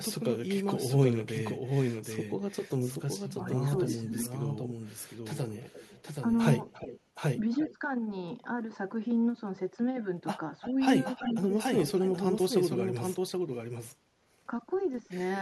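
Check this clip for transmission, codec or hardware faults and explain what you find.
The clip has three faults: a doubled audio track throughout, speech suppressed in double talk three times, and echo leak in three stretches.

Doubled audio track, throughout. A second full-band copy of the speech runs roughly 0.7 s behind the original. It sits about 5 dB lower. It carries no room colour or decay, so it sounds like a clean, late duplicate. This is likely a second capture through a slower path, or an edit that kept two copies out of step.

Speech suppressed in double talk, at 3.24 to 4.29 s, 10.71 to 10.76 s, and 12.8 to 13.06 s. Both ends were talking at once. The echo canceller likely could not tell the local voice from loudspeaker echo, so it turned everything down. The first event dips by up to about 20 dB over roughly half a second. The second is a brief, shallow dip of about 5 dB. 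The third cuts deepest, about 30 dB, for roughly 0.3 s.

Echo leak, at 5.62 to 6.03 s, 6.7 to 7.77 s, and 10.61 to 12.19 s. A faint copy of the speech returns 353 ms late. It sits about 20 dB below the speech in the first stretch and about 15 dB below in the later two. The far end was likely on a loudspeaker, and its echo canceller let part of the microphone pickup through. The returned copy sounds ghostly behind the live speech.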